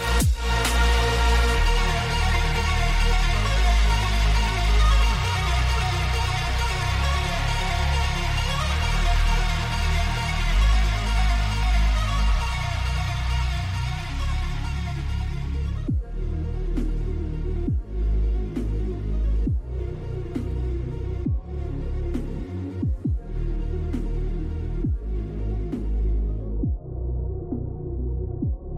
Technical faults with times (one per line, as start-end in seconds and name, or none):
none